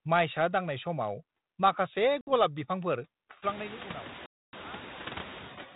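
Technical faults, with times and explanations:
Throughout: noise suppressor artifacts. The suppressor is barely doing anything here, taking only about 1 dB off the bands it judges to be steady noise, frame by frame. So you won't hear much pumping between phrases, just a faint shift in the floor as its gain moves. That matters later, because the room noise that swells in around 3.5 s, ending up only about 17 dB under the speech, gets through almost untouched instead of being held down.
2.21 s and 4.26 s: packet loss on an ADPCM call. Two holes with hard edges. The first is about 60 ms long, a handful of packets' worth. The second runs about 270 ms, which points to a run of roughly thirty packets. The decoder fills each gap with silence. Since ADPCM sends only differences from its own running prediction and step size, the receiving end loses track of the sender, and the speech comes back at 2.32 s and 4.54 s slightly distorted, settling within a few tens of milliseconds.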